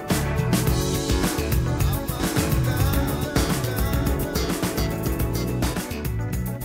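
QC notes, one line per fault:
2.20–5.74 s, doubled audio track: a second full-band copy of the sound trails about one second behind the original, at roughly equal level, dry with no decay, starting and stopping abruptly. The likely cause is a slower second capture path or an edit holding two copies out of step.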